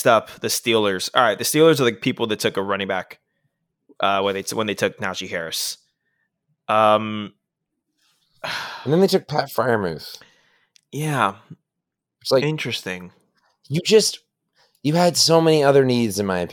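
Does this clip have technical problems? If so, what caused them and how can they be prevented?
No, nothing in this recording points to a technical problem.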